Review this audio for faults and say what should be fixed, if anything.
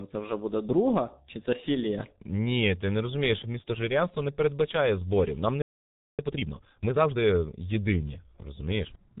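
The whole clip went through a G.723.1 codec at 6.3 kbit/s, so the speech sounds muffled and hoarse, with nothing above 4 kHz. Use a wideband codec.

A playback stall at 5.62 s cuts the sound out for about 0.57 s, likely because the player ran dry. Use a deeper jitter buffer.

Time-compressed catch-up from 6.19 to 7.31 s runs at 1.5x speed, which sounds rushed. Avoid the stall, and there's nothing to catch up.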